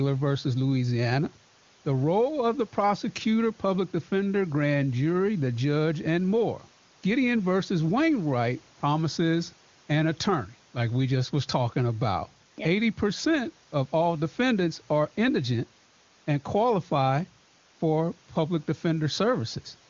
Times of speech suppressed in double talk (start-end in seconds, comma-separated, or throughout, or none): none